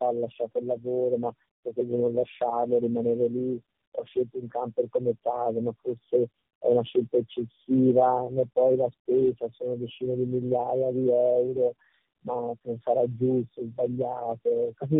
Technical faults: tandem speech coding

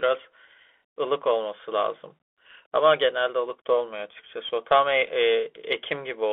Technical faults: Bluetooth CVSD headset codec

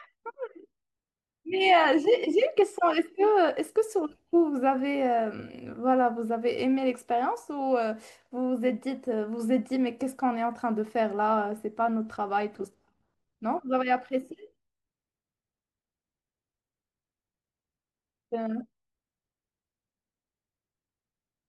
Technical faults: none

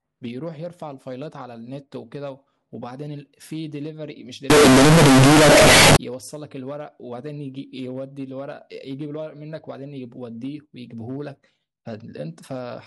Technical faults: signed and unsigned mixed up

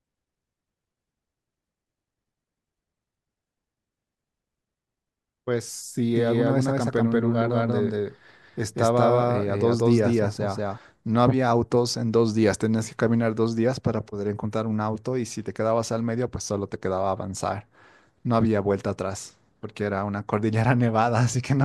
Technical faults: doubled audio track

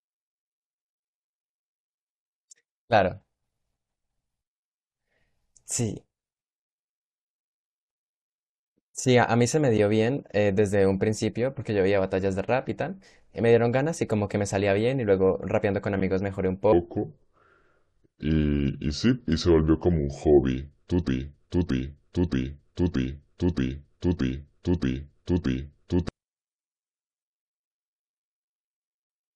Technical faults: section at the wrong speed; broken-record loop

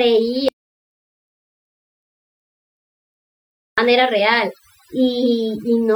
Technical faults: overdone noise removal; audio dropout to silence

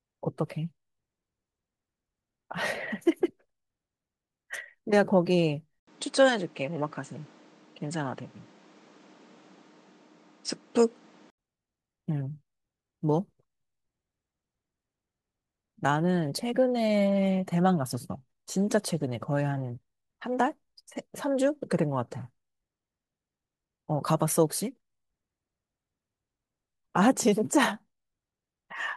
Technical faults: input switched to a poorer device

